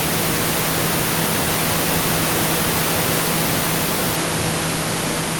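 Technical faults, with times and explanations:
Nothing to flag: the speech recording shows no technical faults.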